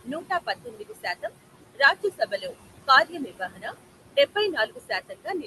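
Throughout the speech, the background sinks away between phrases and swells back up beneath them. These are noise suppressor artifacts. The suppressor pulls down the bands it judges to be steady noise by about 20 dB, frame by frame. Here that noise is room noise sitting only about 10 dB under the speech.

The same processing produces speech cut by the noise suppressor, in four stretches: 0.04 to 1.33 s, 1.75 to 2.54 s, 3.05 to 3.74 s, and 4.16 s to the end. Soft consonants, word tails and quieter syllables sound swallowed or oddly faint, dropping by up to about 18 dB in the first three stretches. The damage adds up to something like 0.7 s, 0.4 s and 0.5 s of affected sound in those stretches. The final stretch is deepest, at about 22 dB. In each case the suppressor mistook low-level speech energy for noise and attenuated it along with the background. The top end rolls off near 12 kHz, as expected from the Opus call path.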